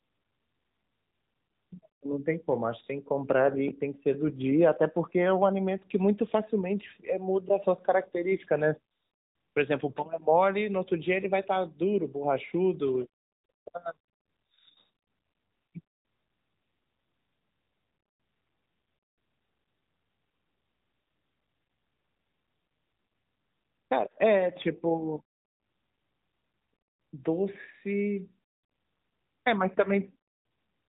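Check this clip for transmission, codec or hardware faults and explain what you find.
There's one fault, and it runs the whole way through: the speech has been through the AMR narrowband mobile codec. Everything above about 3.8 kHz is gone, so the voice sounds boxed-in, like a phone call. AMR-NB rebuilds speech from a vocal-tract model fed with a handful of pulses per frame rather than sending the waveform itself. The damage is plainly audible, a buzzy, synthetic edge that fits a mid-range mode around 10.2 kbps.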